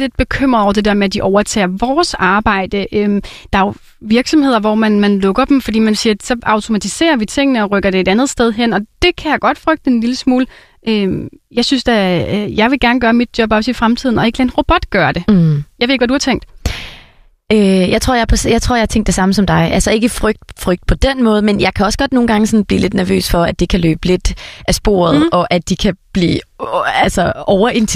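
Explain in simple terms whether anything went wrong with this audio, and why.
Nothing went wrong here; listening closely, no fault can be heard anywhere in this speech recording.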